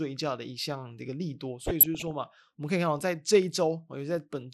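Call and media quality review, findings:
Whole clip: dull, band-limited speech with a gurgling, granular edge; upper bands flicker in and out. Likely MP2 compression, consistent with a rate around 80 kbps. Layer II bit allocation across 32 sub-bands starved, top bands muted, remaining bands coarsely quantised; damage plainly audible.

1.64–2.11 s: short noise blips in single sub-bands over the speech. DAB burbling: residual bit errors, a small fraction of a percent, slipping past error correction and corrupting MP2 samples and scale factors.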